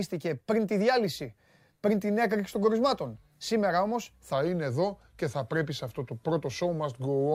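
It's a speech clip, and from 4.33 s right through to the end the last section is playing at the wrong speed. Everything there runs at about 0.89 times its proper rate, so the voice slows down and drops roughly two semitones in pitch at the same moment, sounding deeper and draggier than the first part. That kind of shift is likely from that stretch being played back or fitted to the wrong clock.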